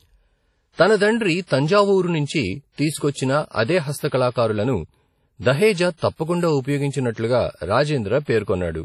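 From start to end, the speech carries heavy transform-codec damage, likely WMA compression: a ringing, washy smear around each syllable, with a hiss that swells and fades along with the signal, and nothing above about 14.9 kHz. Long transform blocks spread the quantisation noise across tens of milliseconds, and quiet spectral detail is dropped entirely, which fits a bitrate near 32 kbps. Unlike a plain low-pass filter, the damage moves with the speech rather than simply dulling the top end.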